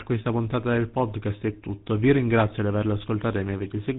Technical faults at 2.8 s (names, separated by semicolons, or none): tandem speech coding